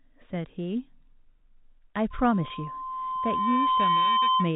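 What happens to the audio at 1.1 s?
Nothing goes wrong at 1.1 s: the speech carries on intact through that moment, with only the narrow, telephone-band sound of its G.711 coding.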